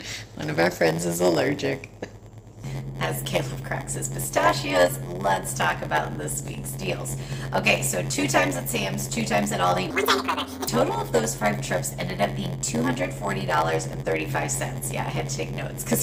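From start to finish there's a steady buzz at about 86.1 Hz, the classic sign of a block size mismatch (padded). Each block arriving short of what the next stage reads gets topped up with silence, which fits 512-sample reads, so everything runs at 0.938 speed.

Then from 9.91 to 10.68 s you get a section at the wrong speed. It jumps to 1.94 times normal, rushed and pitched up roughly ten semitones, most likely because that stretch was played or edited against the wrong clock.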